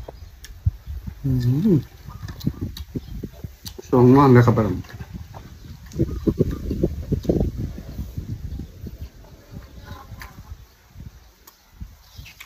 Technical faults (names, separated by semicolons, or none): none